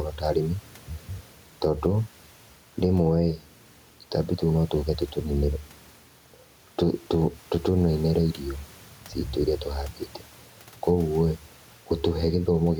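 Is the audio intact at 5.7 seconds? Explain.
No. At 5.7 seconds the speech is affected by gain pumping, which runs through the whole clip rather than occurring as a single event. The level breathes by around 5 dB, so loud and soft parts end up closer in level and the sound is squashed; the room noise sits about 36 dB below the speech. This is likely an input gain set too high, with a fast limiter or compressor repeatedly pulling it down on the peaks.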